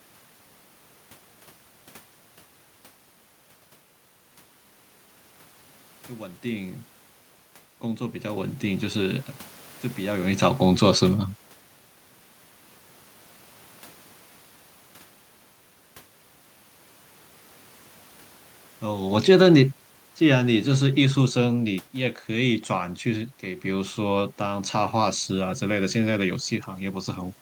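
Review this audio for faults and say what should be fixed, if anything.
From 6.17 to 8.59 s the automatic gain rising is audible. The control judged the input too quiet and lifted its gain by about 5 dB over roughly two and a half seconds. The room noise swells along with the speech, and that shared rise separates it from a talker moving, as happens around 10 s, where only the voice changes level. Preventing it means setting a correct fixed input level so the control has nothing to chase.

From 19.02 to 22.59 s the automatic gain falling does the opposite. Finding the input too loud, the control pulled its gain down by about 6 dB over some three and a half seconds, so the speech begins loud and then sinks. The background sinks with it, which distinguishes this from a talker moving back, where the room noise would hold steady. Disabling the control in favour of a manually set gain would prevent this.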